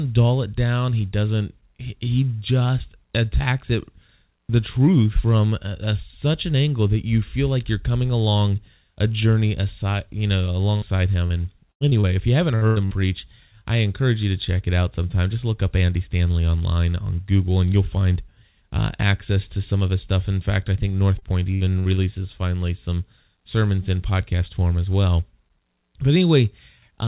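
From 10.76 to 12.94 s and again from 21.19 to 22.0 s, repeated packet loss (robotic sound) makes the speech choppy. Dropped packets were each patched by stretching the last sound: eight gaps up to 89 ms, then four up to 58 ms. On a spectrogram, frozen, repeated harmonic slices alternate with sharp vertical seams. The waveform shows cloned, periodic chunks. Throughout, nothing appears above 4 kHz, consistent with a G.711 call path.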